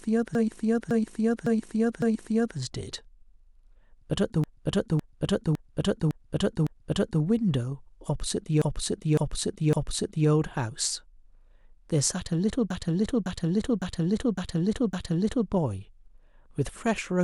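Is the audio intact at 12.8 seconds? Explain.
No. Repeated frames: from 12.70 to 15.49 s a 557 ms block of compressed frames was resent, so the decoder plays that stretch five extra times as a stutter.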